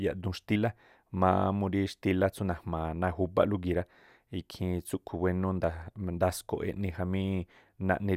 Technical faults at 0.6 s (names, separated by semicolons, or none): compressed frames skipped